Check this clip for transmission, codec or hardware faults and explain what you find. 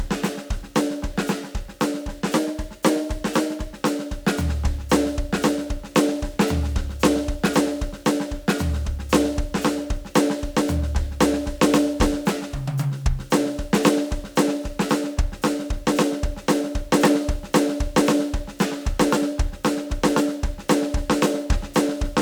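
One fault turns up in this music clip, a drift correction step from 2.31 to 3.76 s. Playback runs about 5.6% fast and pitch rises about 95 cents, nearly a semitone, then snaps back. The likely cause is clock-matching software jumping its rate in one step to rebalance a buffer. Held notes audibly go sharp. On a spectrogram every harmonic line shifts upward together as a flat block, with abrupt steps at both edges.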